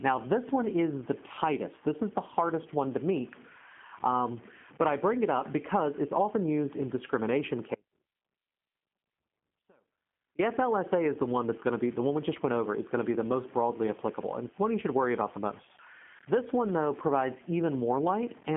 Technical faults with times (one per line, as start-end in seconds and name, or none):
0.00-18.56 G.729 codec